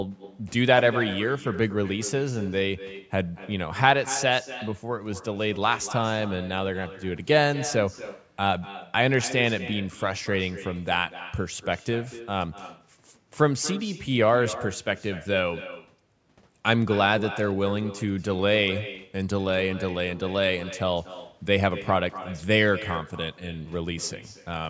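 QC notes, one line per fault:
Throughout: echo with no canceller. The far end's microphone picks up its own loudspeaker and nothing removes it, so speech returns roughly a fifth of a second later, about 14 dB quieter and thinner.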